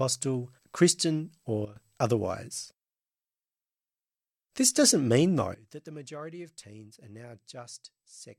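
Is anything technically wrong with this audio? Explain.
Yes. There are sudden gain jumps at 1.65 to 1.76 s, where the level drops by about 12 dB, and from 5.54 s, just after "doesn't mean", to the end, down about 18 dB. The likely cause is gain applied without a ramp, so speech and background noise fall together abruptly.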